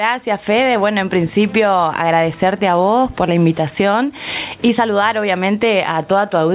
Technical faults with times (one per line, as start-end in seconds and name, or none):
0.00-6.54 gain pumping